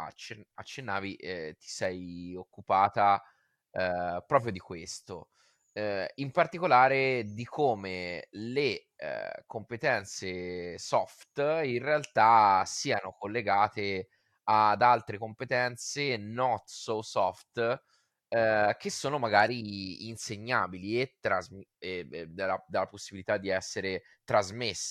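No technical faults are audible anywhere in the speech recording.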